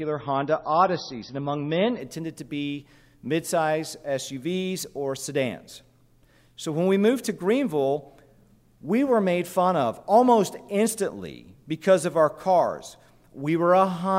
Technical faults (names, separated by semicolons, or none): adaptive stream starting at a low bitrate